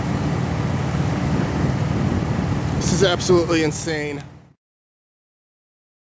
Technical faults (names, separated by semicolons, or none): bit error spike